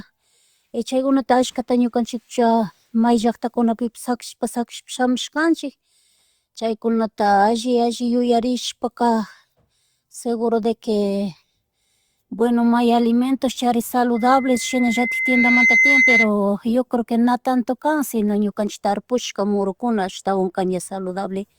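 At 14.15 s there's loudspeaker feedback squeal: the mic is hearing its own speaker, and around 2.1 kHz the loop gain tips past one. The tone swells over a second and a half, ending up a bit louder than the speech, and cuts off at 16.3 s, right before "yo creo na tanto".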